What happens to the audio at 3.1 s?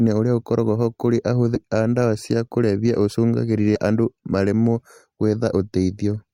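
Nothing goes wrong at 3.1 s; the speech runs through that moment intact, with no dropout, click or distortion.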